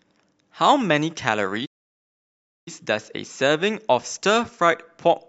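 A playback stall runs from 1.65 s to 2.68 s, cutting the speech off mid-flow and leaving about one second of dead silence before the talk resumes. The likely cause is the player draining its buffer, or its audio thread being held up, so no samples reached the output until it recovered. It sounds like an abrupt dropout rather than a fade: the speech simply halts, hangs in silence, then carries on.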